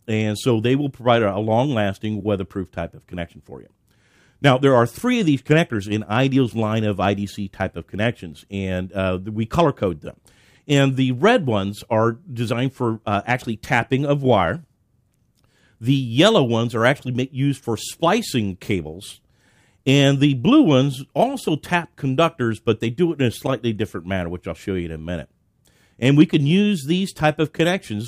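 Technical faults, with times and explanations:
Nothing stood out on listening to this recording.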